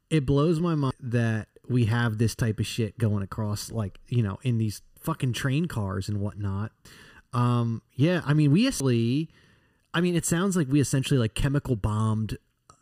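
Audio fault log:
0.91, 6.85 and 8.80 s: damaged data in the compressed stream; corrupted bytes make the decoder misread frames and lose sync, producing brief chirps or blips in the speech until it locks onto the next frame header.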